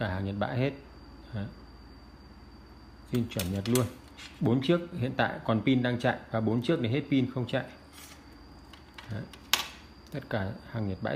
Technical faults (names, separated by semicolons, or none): none